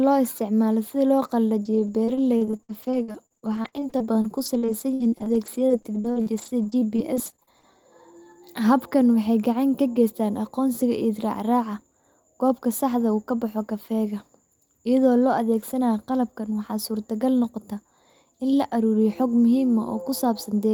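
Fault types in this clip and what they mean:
Repeated packet loss (robotic sound): packets kept going missing or arriving late from 1.63 to 7.65 s, leaving about forty holes of up to 60 ms. Each was patched by extending the preceding sound, so that stretch of speech turns choppy, with pieces missing.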